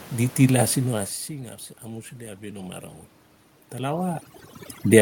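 Speech, and from 1.06 s to the end there's overdone noise removal: the denoiser is set too hard, so the room noise (about 19 dB under the voice) collapses into near silence with twinkly specks. Between 1.27 s and 2.88 s you also get automatic gain rising. The input drops by about 16 dB, and the gain control slowly claws back about 5 dB, so voice and background swell together.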